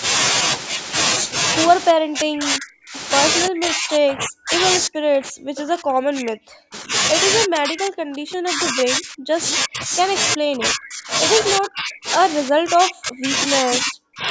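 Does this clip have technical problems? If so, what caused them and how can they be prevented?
Yes. The speech repeatedly dips, by up to about 40 dB, at 1.93–2.95, 3.48–4.53, 4.87–6.93, 7.47–9.38, 9.55–9.92, 10.35–11.12, 11.58–12.06 and 12.51–14.28 s. This is likely speech suppressed in double talk: the echo canceller mistook the talker for loudspeaker echo and ducked it. Using a headset, or an echo canceller with better double-talk detection, prevents it.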